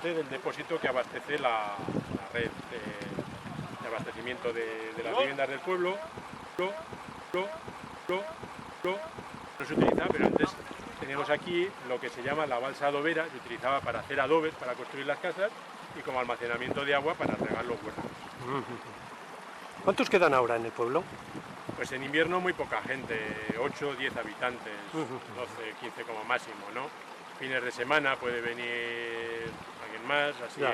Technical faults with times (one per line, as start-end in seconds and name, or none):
6.59-9.60 broken-record loop